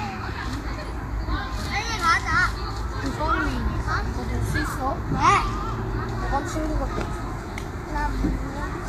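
Throughout, hissy, grainy treble and blurred attacks point to likely low-bitrate Vorbis compression; the spectrogram shows speckled highs and nothing above 14.2 kHz.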